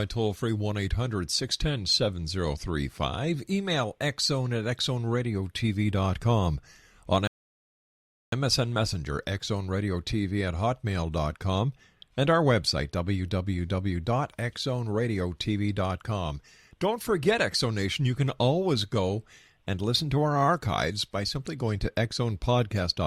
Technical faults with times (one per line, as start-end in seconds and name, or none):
7.27-8.32 rebuffering stall